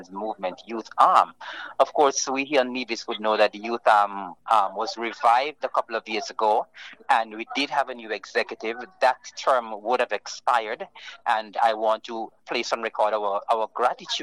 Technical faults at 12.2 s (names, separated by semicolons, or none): none